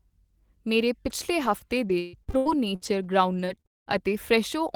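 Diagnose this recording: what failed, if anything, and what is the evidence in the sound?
Repeated packet loss (robotic sound) runs from 1.45 to 4.04 s. This is a network-stage failure. The speech turns choppy as about eleven dropouts follow one another, the longest lasting 200 ms. The receiver patches each hole by stretching the last good audio forward, and roughly a quarter of that stretch is this synthetic fill. Losses come too close together for the concealment to recover, so pieces of the speech go missing.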